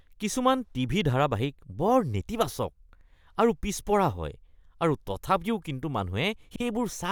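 From 6.51 to 6.60 s, frames out of order: two adjacent frame runs were decoded swapped, so the stretch plays halves reversed, a garbled flutter.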